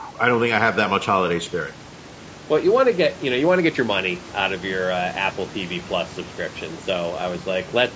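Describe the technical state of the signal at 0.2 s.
Low-delay AAC compression is present at 0.2 s and runs through the whole clip. The sound is plainly rough and grainy, likely from AAC-ELD coding at a rate that fits roughly 32 kbps. Its short frames cannot separate the speech harmonics finely, and at this bitrate the coder lets noise fill the gaps between them. It also thins the upper band into a dull, synthetic edge.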